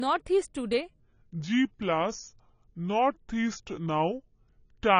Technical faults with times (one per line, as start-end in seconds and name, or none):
0.00-4.99 AAC compression
1.00-4.99 section at the wrong speed